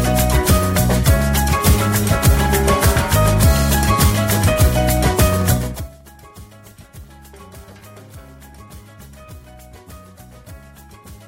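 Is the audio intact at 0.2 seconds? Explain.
Yes, the audio is intact at 0.2 seconds, with no fault present at that moment.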